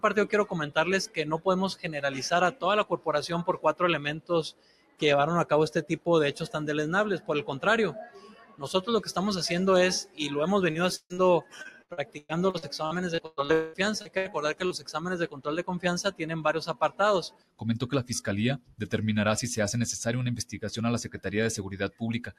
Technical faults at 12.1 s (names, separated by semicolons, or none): noise suppressor applied to music or sounds; sound cut by the noise suppressor; repeated packet loss (robotic sound)